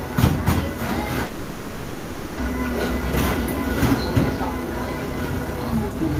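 From 1.25 to 2.41 s the sound gives way to a fading buzz that runs for about 1.1 s. The likely cause is a long network dropout. The receiver stretched the last audio to cover the gap. When sound returns, about 0.6 s of it is gone.

From 4.37 to 6.07 s comes a jitter buffer speed-up. The buffer had built up extra delay. The receiver trimmed many short slices to drain it. The sound runs at 114% speed with unchanged pitch and feels hurried. Roughly a third of a second is cut.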